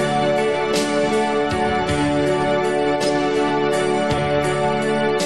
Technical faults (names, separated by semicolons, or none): compressed frames skipped